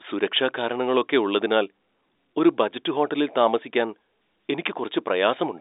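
No technical faults are present.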